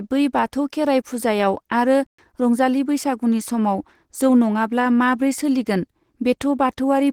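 From the start and throughout, the speech carries Opus compression artefacts that are plainly audible. The sound is muffled and hoarse, with a grainy, rough texture on sustained sounds, the character of the encoder's hybrid mode, in which a speech-oriented coder handles the lower band and a transform coder fills the upper band. The bandwidth stays full, so the damage comes from coarse coding, not lost treble. This likely reflects a low bitrate, which fits roughly 16 kbps.

At 2.07 s the output stops dead and stays silent until 2.19 s, a playback stall lasting 120 ms. The player's output was likely starved: it either ran out of buffered data or its audio thread was held up, so nothing was sent until it recovered. Playback then resumes with "रंजालि बैसागुनि", and the speech cuts off abruptly and restarts abruptly on either side of the gap.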